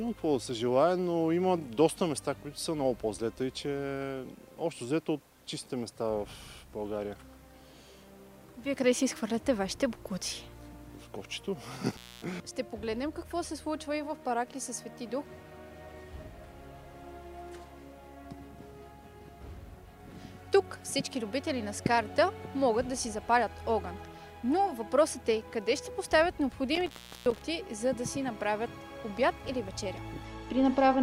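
Intermittent contact occurs twice, first from 11.90 to 12.24 s, then from 26.75 to 27.41 s. A loose cable or plug briefly breaks the signal path, so the audio drops out for about 0.26 s the first time and about 0.35 s the second. Each dropout is framed by crackle as the connection scrapes open and shut, and faint hiss remains while the line is broken.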